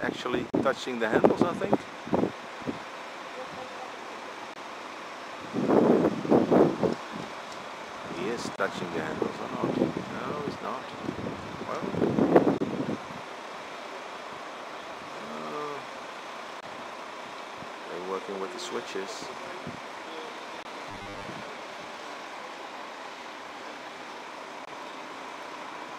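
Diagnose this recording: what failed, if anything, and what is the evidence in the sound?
Gaps at joins of encoded pieces, at the codec or storage stage: silent holes open at 0.50 s (about 35 ms), then at 4.54, 8.56, 12.58, 16.61, 20.63 and 24.65 s (about 23 ms each), every 4 s. Each untrimmed encoder delay and padded last frame survives the join. The waveform shows flat dropouts with slightly smeared edges. The spectrogram shows thin vertical blank stripes.

Robotic sound from repeated short buffers, at the driver or buffer stage, from 20.91 to 21.24 s: the sound turns into a rigid metallic buzz at 100 Hz, with roughly half the audio replaced. This is likely a 10 ms buffer replayed while fresh data lags. The spectrogram shows evenly spaced horizontal harmonics of 100 Hz. The waveform shows identical 10 ms cycles.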